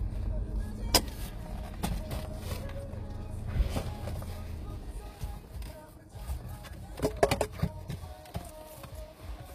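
Throughout the clip the treble sounds bright yet synthetic, grainy and metallic, and stops entirely near 14.9 kHz. This is likely HE-AAC compression at about 24 kbps, rebuilding highs by copying lower bands upward. Unlike a plain low-pass, the top end is not dulled but falsified.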